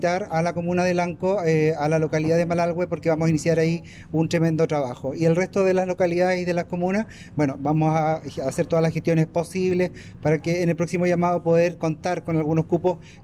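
From 1.65 s onward, a buzz at 20 Hz rides on the sound. That is resampler restarted on every block: each 50 ms block was converted from 48 kHz to 44.1 kHz in isolation, leaving an error at every edge. Unlike steady hum, it follows the signal.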